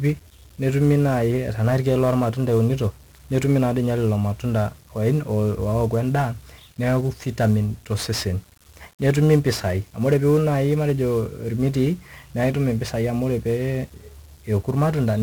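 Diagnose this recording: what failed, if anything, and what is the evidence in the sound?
The codec stage failed, with 1-bit DFPWM compression throughout the speech. The whole clip is fuzzy and crackly, and the treble is buried in hiss. Each sample keeps only one bit, nudging a running level up or down. That leaves heavy broadband quantisation noise, consistent with a 48 kbps stream.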